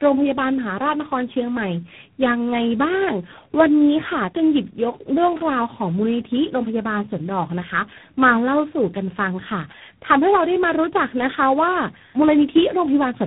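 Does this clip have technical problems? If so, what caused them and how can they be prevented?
Yes, there's tandem speech coding throughout: the speech sounds rough, noisy and warbly, with nothing above 3.9 kHz. That fits three codecs in a row, such as G.726 around AMR-NB, each re-coding the previous one's damage. To prevent it, keep the call in one codec end to end, or pass the coded bits through unchanged instead of decoding and re-encoding at each link.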